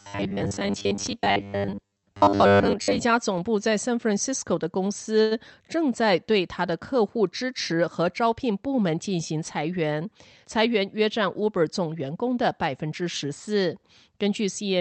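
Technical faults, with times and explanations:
0.01–3.02 s, robotic sound from repeated short buffers: the speech becomes a rigid metallic buzz at 100 Hz, likely because new audio arrived too seldom and roughly 10 ms chunks were replayed in place of most of the real audio. A spectrogram shows evenly spaced horizontal harmonic stripes every 100 Hz. The waveform shows identical 10 ms cycles.
5.21–5.33 s, short stall from a late packet: a packet arrived late and the jitter buffer ran empty, so the receiver stretched the last sound for 96 ms and then resumed where it left off. No speech is lost, but everything after this point plays 96 ms later. A spectrogram shows a flat, frozen smear. The waveform shows a periodic repeat. Above 8 kHz the spectrogram is empty throughout, as expected from the call codec's band limit.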